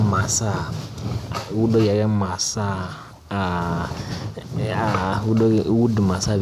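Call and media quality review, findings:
Nothing to flag on this speech recording; no audible problems anywhere in it.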